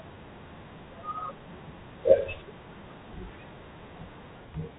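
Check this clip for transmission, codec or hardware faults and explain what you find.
No transmission, codec or hardware faults turn up in this clip.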